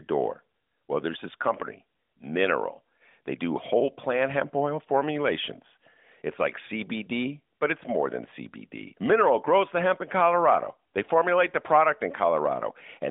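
No technical faults can be heard in the recording.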